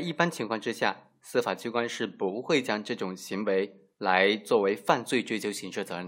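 No technical faults can be heard anywhere in this speech recording. Nothing in the signal path calls for comment at any point.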